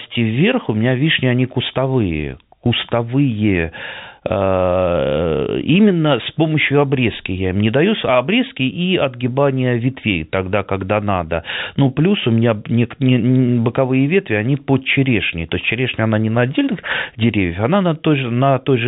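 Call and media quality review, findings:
No audible faults found.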